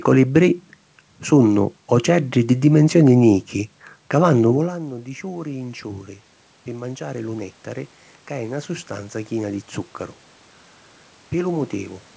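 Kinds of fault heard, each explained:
Automatic gain rising: from 4.55 to 6.12 s the level creeps up about 4 dB, with room noise swelling alongside the voice, unlike a talker simply moving closer.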